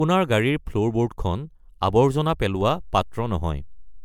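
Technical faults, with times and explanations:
Throughout: generation loss. The speech sounds swirly, hollow and smeared, with consonant attacks blurred and a hard limit near 20.1 kHz. The likely cause is around four rounds of MP3 encoding, each on a shifted frame grid, so quantisation noise and spectral holes accumulate beyond what a single 128 kbit/s-like encode would leave.
2.61 s: DC step. A low thump is heard while the speech carries on unchanged. The waveform's zero line jumps to a new offset and holds there until the end at 4.05 s, as when a converter recalibrates or an offset input is switched in.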